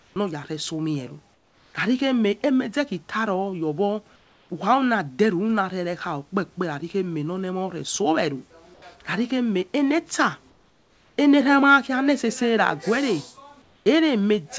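In six pauses in the speech, at 0.00–0.16, 1.34–1.74, 4.16–4.50, 8.74–8.82, 10.50–11.18 and 13.62–13.86 s, comfort noise replaces the background. The likely cause is that the sender's voice detector stopped transmission and the receiver filled the gaps with synthetic noise. Each gap sounds flat and textureless, about 2 to 6 dB quieter than the room. On a spectrogram the detailed background turns into a smooth, uniform wash, and the waveform envelope dips and goes unnaturally steady.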